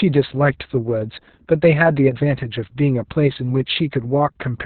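Opus voice compression affects this speech clip from start to finish, heavily. Nothing is left above 4.3 kHz, the narrowband limit of Opus's SILK linear-prediction mode, so the speech sounds muffled and boxy. SILK models the voice with a prediction filter plus a coarsely coded excitation, and at this starved level that excitation turns hoarse, buzzy and slightly robotic. The damage points to a bitrate near 6 kbps with long frames.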